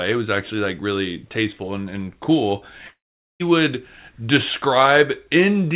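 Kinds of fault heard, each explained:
Long network dropout: at 2.88 s the speech breaks off, the last sound stretches into a buzz that fades within about a tenth of a second, then near-silence until 3.42 s, when speech resumes with about 0.52 s gone. Likely a run of lost packets the receiver tried to cover.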